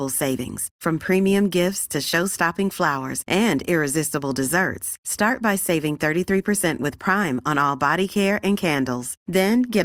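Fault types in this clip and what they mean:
DAB burbling: weak-reception bit errors corrupt MP2 sub-band data, giving brief noise blips before "from premium gifts to", "and irresistible desserts" and "care and"; spectrograms show isolated band-limited blotches.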